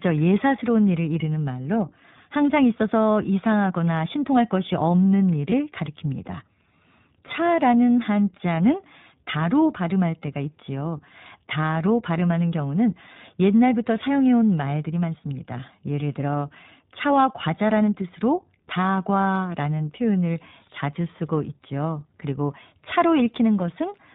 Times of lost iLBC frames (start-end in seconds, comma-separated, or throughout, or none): 2.77-2.81, 5.50-5.53